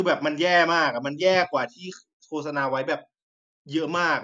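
No technical faults can be heard in this recording.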